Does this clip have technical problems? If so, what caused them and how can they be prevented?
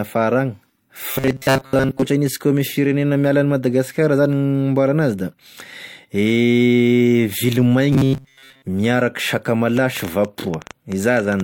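Yes, three kinds of fault are audible.

Transcoding between lossy codecs runs through the whole recording. The speech has nothing above 17.2 kHz, and two distinct sets of compression artefacts sit on top of each other: smeared, warbly detail in the upper band and a synthetic quality to the highs. This is likely an MP3 stage near 64 kbit/s followed by an HE-AAC encode around 48 kbit/s, with the second encoder wasting bits reproducing the first one's damage. Prevention: encode once from the original uncompressed master rather than re-encoding an already compressed file.

Robotic sound from repeated short buffers occurs from 1.11 to 2.09 s and again from 7.93 to 8.66 s. In both stretches the speech turns into a rigid metallic buzz at 134 Hz that only loosely tracks the speech. The likely cause is audio arriving too slowly, so the playback side loops a short segment, which fits a buffer of about 7.5 ms, while most of the real audio in those spans is skipped. 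Prevention: give the stream enough buffering and processing headroom that underruns don't occur.

A train of clicks runs from 9.77 to 11.41 s. Around fifteen similar pulses arrive at about 8.6 per second with uneven spacing, peaking a few dB above the speech and audible in gaps as well. This is likely interference from nearby equipment or a faulty connection or power supply. Prevention: isolate cabling and power from noisy gear and use a stable, properly driven audio interface.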